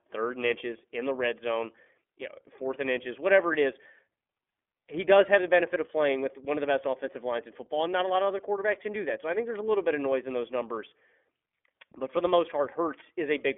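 Throughout, the speech carries iLBC codec damage, plainly audible as a rough, slightly synthetic edge. Each 30 ms frame is coded independently, consistent with 13.33 kbps. A spectrogram shows a hard ceiling near 3.6 kHz, with no energy above it.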